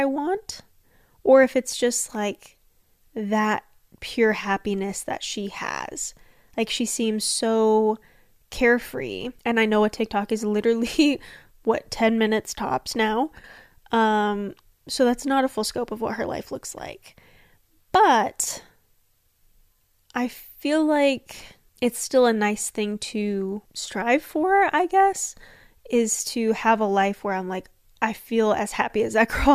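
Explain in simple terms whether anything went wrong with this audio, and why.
Two short dips in loudness happen in this speech. The first comes right after "minutes tops now", from 13.39 to 13.44 s. The second comes after "I'm like I feel", from 28.82 to 28.90 s. Each lasts well under a tenth of a second. The sound briefly gets quieter, then returns. This is a one channel drops out fault. One side of the stereo signal likely cut out for a moment, so only half the sound reached the mix.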